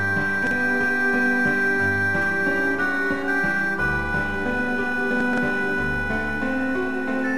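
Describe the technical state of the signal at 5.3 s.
At 5.3 s the music passes through a case of chunks out of order, spanning 5.21 to 5.38 s. One block of about 43 ms was written three blocks late, so it plays after material that should follow it. The result is a brief jumbled shuffle with three hard joins. Unlike a dropout, nothing goes silent or missing, and unlike a stutter, nothing repeats.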